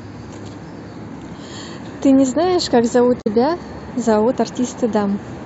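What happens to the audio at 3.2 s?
Damaged data in the compressed stream, 3.18–3.27 s: the decoder misreads corrupt frames and resyncs, giving a short chirp, squawk, click or hole.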